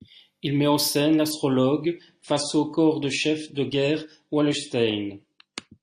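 A speech recording whose quality drops suddenly at 1.31 s and stays degraded until the end. This is an adaptive stream switching to a lower bitrate. The player moved from a higher-quality version to a much leaner one, which fits a step from about 96 to 32 kbit/s AAC. There is no gap at the switch. From that point nothing above 9.5 kHz remains, so the treble is dull. Codec artefacts also become more audible.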